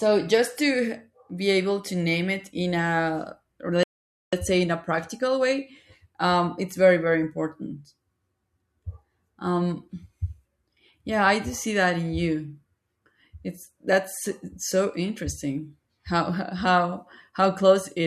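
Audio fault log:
3.83–4.33 s, rebuffering stall: after "it in a or" the speech cuts to dead silence for 0.49 s, then resumes at "say in a practical" with nothing lost, because playback ran dry and waited for data. The waveform shows a flat gap; the spectrogram shows a blank, sharp-edged band.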